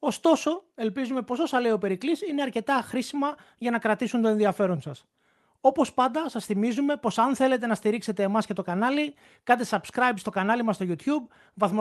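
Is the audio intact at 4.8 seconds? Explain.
Yes, the speech at 4.8 seconds is intact, with no dropout, glitch or other fault at that moment, only the ordinary character of the WebRTC call path it passed through.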